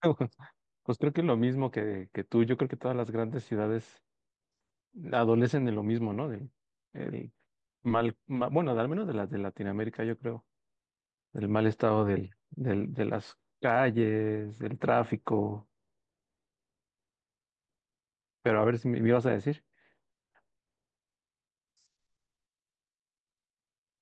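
A speech recording with no audible technical faults anywhere in the signal.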